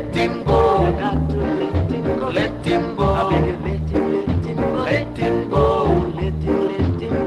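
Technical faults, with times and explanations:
No technical faults are audible anywhere in this audio.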